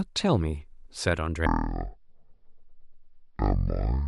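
From 1.46 s to the end, stereo read as mono: interleaved left and right samples run as one channel, so the speech plays at half speed and an octave lower.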